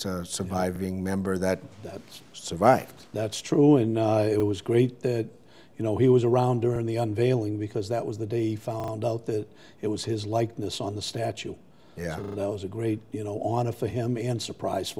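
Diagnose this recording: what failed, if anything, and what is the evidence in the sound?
At the driver or buffer stage, new audio arrived late, so the device replayed its last 40 ms block, a repeated buffer. It plays once extra at 0.76, 4.4 and 6.76 s as a brief stutter, and three extra times at 8.8–8.92 and 12.24–12.36 s as a stutter with hard joins.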